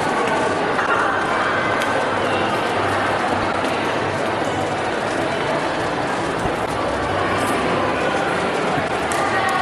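A garbled flutter breaks the sound at 0.78–0.95 s, 3.31–3.55 s, 6.45–6.68 s and 8.77–8.99 s. Each is frames out of order: two adjacent runs, about 78 ms at first and about 105 ms afterwards, play swapped, losing no time.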